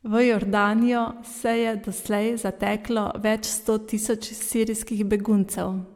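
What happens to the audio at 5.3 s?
Nothing goes wrong at 5.3 s; the speech carries on intact through that moment with no dropout, click or distortion to be heard.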